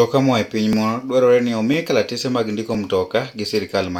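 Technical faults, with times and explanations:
0.73, 1.74 and 2.75 s: overlapping chunks. Each one-second chunk starts about 7 ms early, so that sliver plays twice, giving a stutter at each join, the first right after "moa e piny".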